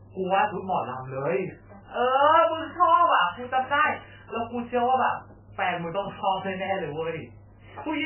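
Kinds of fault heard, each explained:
MP3 compression: the speech sounds heavily watery and swirly throughout, and dull, with nothing above 3 kHz. This likely comes from MP3 encoding at a very low bitrate, around 8 kbps, which forces the treble cut and makes weak frequency components flicker on and off.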